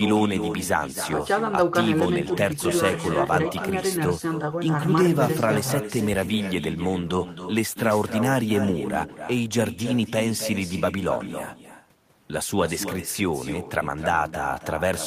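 Throughout the speech, an echo with no canceller trails each phrase by roughly a third of a second, about 9 dB down. It sounds thinner, as a far-end loudspeaker feeds the microphone unchecked.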